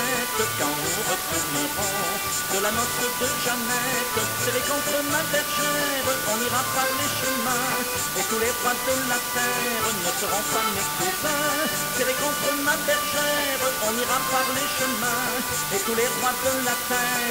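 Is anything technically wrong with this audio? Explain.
Yes. The whole clip suffers from low bit depth with dither. The audio appears to use only 3 bits per sample. Dither was added before rounding to those few levels. That turns the rounding error into steady white noise instead of harsh distortion. The result is a constant, even hiss from start to finish. It sits only about 5 dB below the sound itself, so it is very prominent. No gritty distortion is heard, just that broad hiss.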